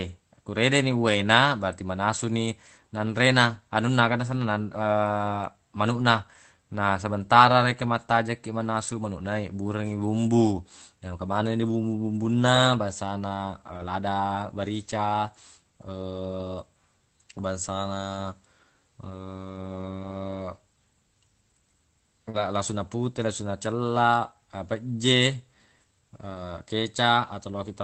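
Speech carried over a WebRTC call path, where the Opus codec band-limits everything to about 8 kHz. Packets were lost several times, and each time the following packet held a low-bitrate duplicate that the decoder played instead. This is a lost packet rebuilt from error correction: there is no gap, but those stretches turn rougher and noisier. It happens at 11.27 to 11.37 s (60 ms rebuilt, which fits three 20 ms packets), 12.55 to 12.57 s, 13.73 to 13.91 s (100 ms), 19.99 to 20.13 s (80 ms) and 22.34 to 22.36 s. Just before that last one, 40 ms of audio arrived too late to decode, a short concealed packet loss. From 22.29 to 22.36 s the receiver filled about 44 ms by extending the preceding sound, voiced parts from their pitch and unvoiced parts as shaped noise, before crossfading into the rebuilt frame. The result is a brief smear or wobble, and a short consonant there may drop out.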